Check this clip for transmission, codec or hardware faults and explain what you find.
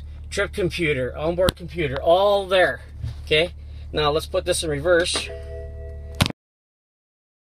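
One fault is present: a cut-off end. At 6.31 s the sound stops mid-event and drops straight to digital silence for the remaining 1.3 s. The final buffers were never written or played out, so nothing decays. That abrupt stop, with no tail or fade, separates it from a natural ending.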